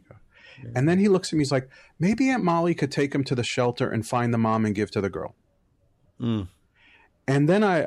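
Speech runs the whole way through with sample clock jitter: an unsteady converter clock, wobbling by about a microsecond and a half, adds a hiss roughly 40 dB down that swells on loud, bright sounds and drops out in pauses, unlike a steady noise floor.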